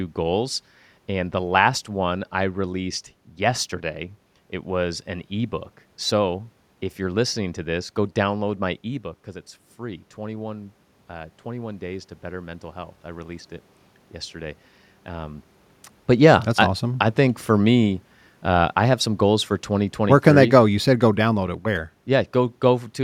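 From 9.78 s to 15.54 s the voice and the room noise behind it swell together, climbing steadily over nearly six seconds rather than jumping. This is automatic gain rising. Just before, around 8.5 s, the talker moved away and the level at the microphone fell by about 9 dB. The gain control read that as a quiet input and lifted its gain by about 7 dB, dragging the background up along with the voice.

From 16.09 s to 22.93 s the opposite happens. The voice sinks gradually, with the room noise sinking alongside it. This is automatic gain falling. Around 16.0 s the talker moved again, while the gain was still raised from the previous correction. The control backed its gain off by about 7 dB over almost seven seconds.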